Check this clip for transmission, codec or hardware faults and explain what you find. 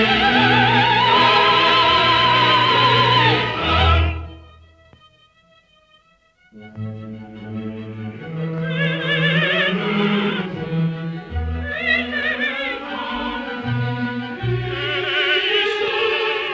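Nothing here gives cause for concern: the sound came through a WebRTC call path working as intended, and its content stops at 8 kHz, which fits a G.722 wideband codec running at around 64 kbps and is just how such a call normally sounds.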